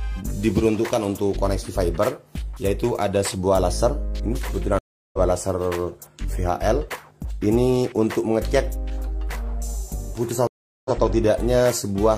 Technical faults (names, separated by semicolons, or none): stream reconnect